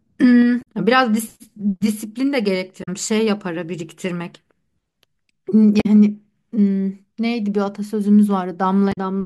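Damaged data in the compressed stream at 0.59–0.64 s, 2.80–2.88 s, 5.77–5.86 s and 8.89–8.98 s: corrupted frames make the decoder lose sync, producing brief chirps or squawks in the speech.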